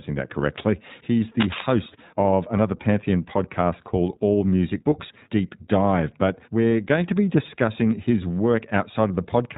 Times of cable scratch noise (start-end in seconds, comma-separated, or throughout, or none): 1.40-1.62